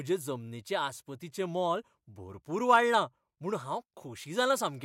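No technical faults can be heard anywhere in this speech recording. There is no point in the audio that needs a time or an explanation.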